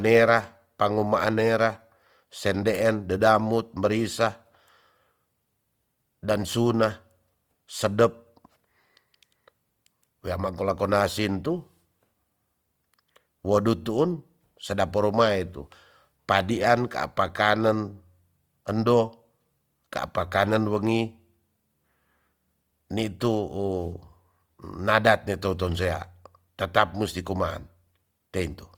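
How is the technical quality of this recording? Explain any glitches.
The recording carries audible compression damage from start to finish. Throughout, the speech sounds grainy and rough, with noisy texture where tones should be clean, though content still reaches about 20.4 kHz. This is likely Opus compression in its music mode at a low rate, fitting roughly 24 kbps, filling starved bands with noise.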